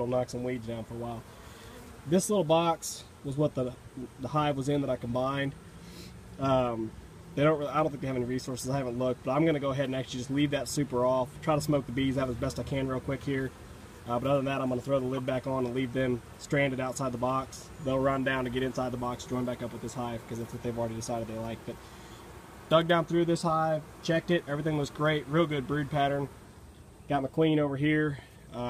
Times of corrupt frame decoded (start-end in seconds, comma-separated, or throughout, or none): 15.14-15.20